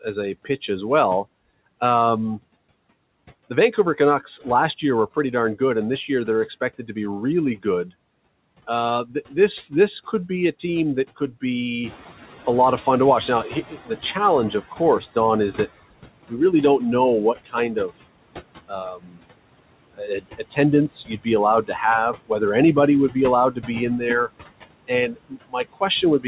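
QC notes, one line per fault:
Throughout: noise suppressor artifacts. The steady background is pulled down by about 20 dB, sinking in the gaps and rising under the speech.
3.77 to 7.65 s, 8.67 to 11.43 s, 16.29 s to the end (after "is that"): speech cut by the noise suppressor. Stretches of speech drop by about 12 dB, about 13 dB and up to about 22 dB, totalling roughly a tenth to a sixth of a second in the first two runs. The suppressor mistook soft speech for noise, so it sounds swallowed rather than merely noisy.
11.83 to 15.05 s: noise suppressor catching up. The room noise jumps by about 12 dB near 12 s, and the suppressor's noise estimate takes about 3.2 s to follow, so the louder background leaks through at first before sinking again by about 14 dB. This is a slow fade of noise, not a loss of speech.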